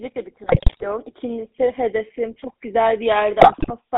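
Across the whole clip the speech has a buzzy, gravelly roughness and a narrow telephone band of about 200 Hz to 3.7 kHz. This is the GSM full-rate codec, which rebuilds the voice from a vocal-tract filter excited by sparse regular pulses, consistent with a 13 kbps stream.

From 0.46 to 1.04 s, and again from 3.40 to 3.71 s, the speech breaks into squawks, pops and gargling. These are GSM bit errors: corrupted filter, pitch and gain values distort each frame, pointing to an error rate of several percent.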